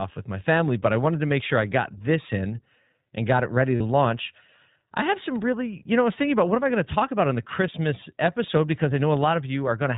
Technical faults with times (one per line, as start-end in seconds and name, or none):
0.00-9.97 iLBC codec
3.76-3.82 lost iLBC frames